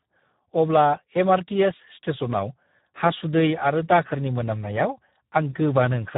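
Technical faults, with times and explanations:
Throughout: Speex codec. Speech sounds hoarse and noisy, with nothing above 3.8 kHz, which fits a low setting near 8 kbps starving the excitation.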